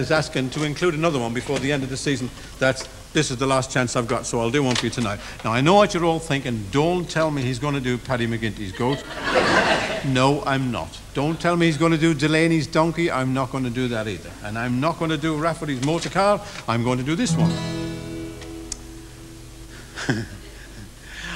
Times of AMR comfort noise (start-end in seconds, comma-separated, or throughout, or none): none